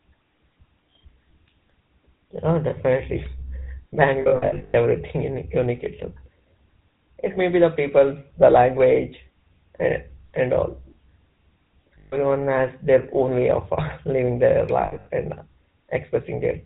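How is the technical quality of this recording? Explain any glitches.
The technical quality is poor: the whole speech recording carries plainly audible narrowband codec damage, and three short stretches break up into held, ringing dropouts.

GSM full-rate codec distortion runs throughout. The sound suggests the original GSM full-rate codec at about 13 kbps. It models the vocal tract and excites it with coarse, sparse pulses, giving speech a buzzy, gravelly roughness. On a spectrogram, nothing appears above 4 kHz.

Lost GSM frames occur at 4.22–4.75 s, 11.98–12.16 s and 14.82–15.07 s. The decoder patched missing frames by repeating the last good frame at falling level, producing a rough, metallic ring. At 4.22 s, losses total 360 ms scattered over 520 ms, the longest run around a tenth of a second. At 11.98 s, 140 ms is lost. At 14.82 s, 160 ms is lost over 240 ms, the longest run around 70 ms. 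Spectrograms show smeared, repeated harmonic patterns, and waveforms show decaying envelopes.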